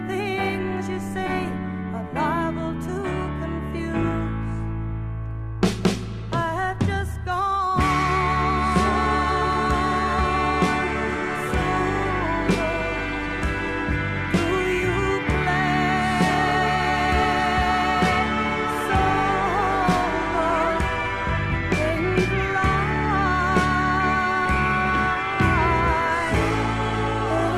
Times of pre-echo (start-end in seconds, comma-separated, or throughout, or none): none